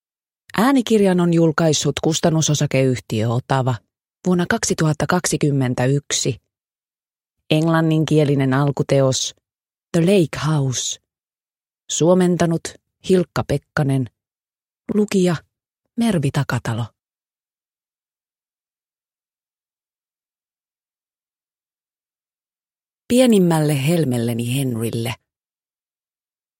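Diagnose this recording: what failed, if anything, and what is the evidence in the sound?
Nothing failed, and there is no evidence in the sound of any fault.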